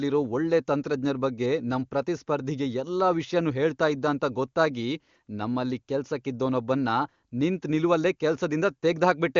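No technical faults are audible.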